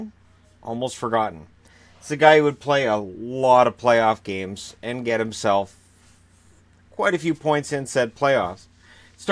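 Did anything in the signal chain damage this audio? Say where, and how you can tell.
No, nothing along the chain has left an audible mark on this signal, which holds steady without any disturbance that would point to damage at any stage.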